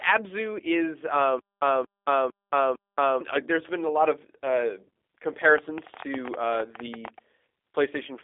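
Throughout, the speech carries G.729 codec damage at 8 kbit/s. Nothing passes above 3.7 kHz, and the rough, synthetic buzz from frame-based resynthesis sets it apart from plain band-limiting.

From 1.39 to 3.21 s, just before "uh there's been a", there is a stutter with silent gaps. The same 0.23 s fragment plays four times, every 0.45 s, with about 0.22 s of digital silence between repeats. This likely comes from a stalled stream retrying. Unlike a simple dropout, the identical burst returns each time.

From 5.44 to 7.19 s, a train of clicks ticks over the speech. There are around twenty clicks at about 12 per second, unevenly spaced, roughly 10 dB above the speech, likely from electrical interference. They share one shape, unlike random crackle.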